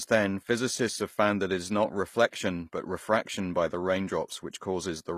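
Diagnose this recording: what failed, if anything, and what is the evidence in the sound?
Codec stage, throughout the speech: the treble stays bright but sounds synthetic, and s sounds turn gritty and metallic. The likely cause is HE-AAC compression, which rebuilds the treble from copied lower bands and fits about 24 kbps. A plain low-pass would dull the sound, not roughen it.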